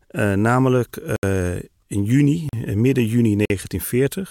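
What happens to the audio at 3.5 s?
A block of digital silence runs from 3.45 to 3.50 s, about 46 ms long. The output buffer likely wasn't filled in time, so samples became zeros, which fits a 2048-sample buffer. The speech cuts out abruptly, leaving a short hole.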